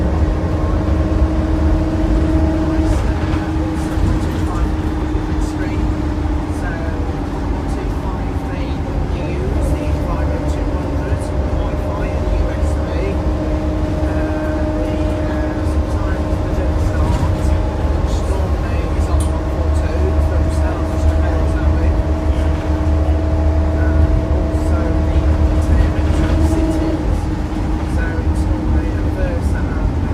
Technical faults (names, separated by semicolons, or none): none